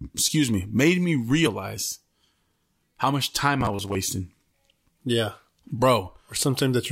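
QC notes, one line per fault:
1.43–1.47 s, damaged data in a compressed stream: a brief glitch as the decoder misreads corrupted frames, loses sync and skips ahead to the next valid header.
3.61–3.95 s, robotic sound from repeated short buffers: speech becomes a rigid, metallic 100 Hz buzz, likely from 10 ms buffers repeated to fill gaps, with about half the audio replaced.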